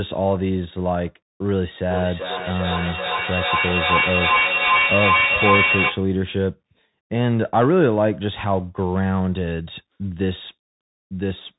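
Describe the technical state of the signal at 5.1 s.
At 5.1 s you're inside a feedback echo between two devices, running from 1.91 to 6.15 s. A second device is replaying the sound into the microphone, which sends it round again at roughly 0.4 s intervals, and the repeats build to about 5 dB above the speech instead of fading. On top of that, the Bluetooth CVSD headset codec is audible throughout: its coarse one-bit up-down coding cuts everything above 3.8 kHz, roughens sibilants and leaves a grainy hiss underneath.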